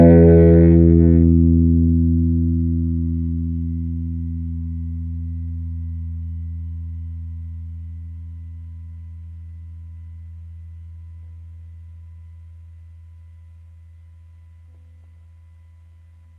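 Nothing to flag in this recording of sounds: no technical faults are audible at any point.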